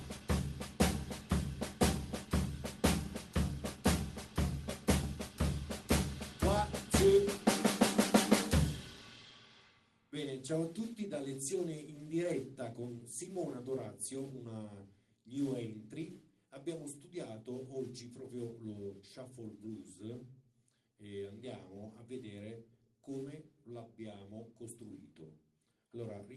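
Nothing goes wrong in this one: the audio just comes through a normal call path, with the usual coding texture and top end rolled off around 12 kHz that you'd expect from Opus at 24 kbps, and nothing beyond that stands out.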